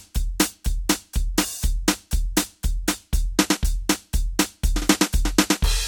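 No technical faults are audible anywhere in the music.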